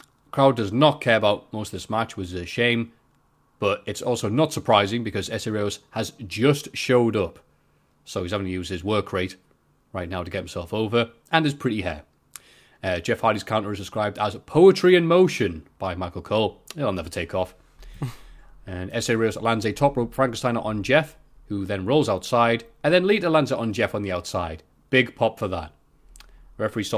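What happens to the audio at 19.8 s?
Nothing goes wrong at 19.8 s; the speech carries on intact there, with no dropout, click or distortion.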